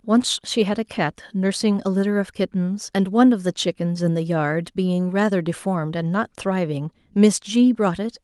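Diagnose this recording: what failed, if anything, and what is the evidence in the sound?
Nothing failed; no fault is audible anywhere in the speech.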